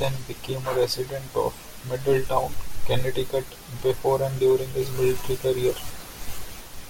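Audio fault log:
No technical faults are audible anywhere in this speech recording.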